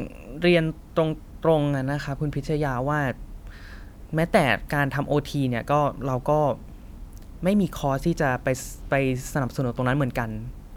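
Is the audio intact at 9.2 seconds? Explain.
Yes, the audio is intact at 9.2 seconds, with no fault at that moment.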